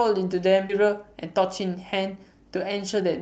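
At 0.69 to 0.71 s the speech jumps abruptly forward with no gap. This is a skip ahead: roughly 0.7 s of audio was dropped and the two sides were joined directly.

From 0.81 to 3.05 s the speech sounds hurried at unchanged pitch, running 108% fast. This is a jitter buffer speed-up: the receiver trimmed about 0.2 s of pitch-period pieces to shrink excess delay, through a call path whose codec limits the audio to about 8 kHz.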